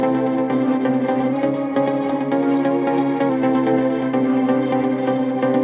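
From 1.33 s to 3.29 s, a drift correction step is the likely cause: software keeping two clocks in line appears to have changed the playback rate in a single jump to rebalance its buffer. The sound runs about 5.8% fast, pitch rising by roughly 97 cents, close to a semitone, then snaps back at 3.29 s. The narrow call-path band holds nothing above 4 kHz.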